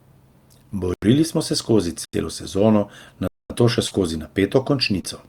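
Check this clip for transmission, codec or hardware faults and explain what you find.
Two kinds of fault are audible in this speech: three blocks of digital silence and two short concealed packet losses.

Blocks of digital silence occur at 0.94 to 1.02 s, 2.05 to 2.13 s and 3.28 to 3.50 s. The first two each last about 85 ms, a length that fits an output buffer of 4096 samples going unfilled in time. The third runs about 223 ms. Each time the signal drops straight to silence and returns with no fade, leaving a hard hole.

Short concealed packet losses occur at 3.87 to 3.93 s, where about 40 ms was missing, and at 5.01 to 5.05 s, where about 20 ms was lost. In both, the receiver never got that stretch in time. It extended the preceding sound to cover the hole, then blended back into the real audio. The patch comes across as a brief smear or wobble rather than a gap.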